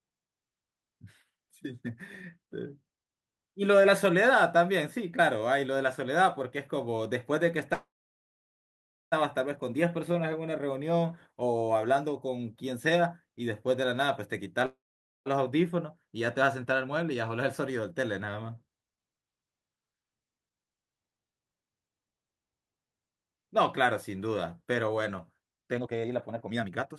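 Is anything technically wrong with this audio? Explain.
Yes. The speech stalls twice and later rushes twice.

Call audio freezes occur at 7.73–9.14 s and 14.66–15.28 s. In each, the last sound carries on briefly as a fading buzz, then drops to near silence, for about 1.26 s in the first and about 0.49 s in the second. Speech then resumes where it stopped, with nothing lost. The likely cause is packets held up in transit, so the jitter buffer ran dry and the receiver stretched out its last audio. Each stall adds its full length, 1.39 s and 0.6 s, to the delay.

Jitter buffer speed-up follows. From 15.37 to 18.49 s the speech runs about 7% fast, a slight hurry at unchanged pitch. From 25.77 to 26.97 s it runs about 65% fast and sounds clearly rushed. The buffer held more audio than it targets, so the receiver cut out many short pitch-period slices to catch up. That removes roughly 0.2 s in the first stretch and roughly 0.7 s in the second.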